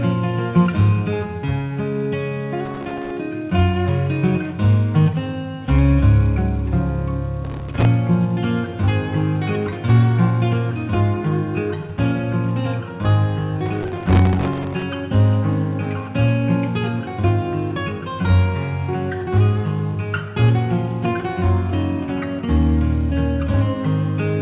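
Processor overload crackle tears through the audio at 2.66–3.11 s, 7.45–7.85 s and 13.66–14.83 s. It is dense gritty crackle from dozens of tiny silent gaps, fitting missed buffers of roughly a millisecond and a half, not the sparser, longer holes of network packet loss. Above 4 kHz the audio is empty, as expected of a G.711 call line.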